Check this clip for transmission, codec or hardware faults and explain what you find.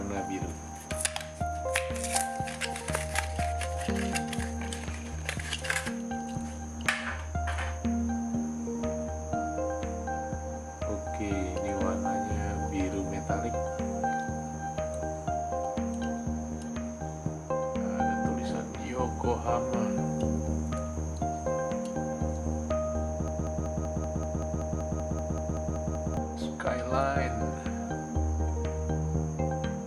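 One fault stands out: a broken-record loop from 23.28 s to 26.17 s. A fragment of about 0.19 s repeats exactly, back to back, 15 times, so the sound stutters in a rigid, mechanical rhythm and whatever should have played in those three seconds is lost. The likely cause is a stalled player, encoder or stream that kept resending the last fragment it held. On a waveform or spectrogram the pattern shows as identical blocks tiled at a fixed 0.19 s interval.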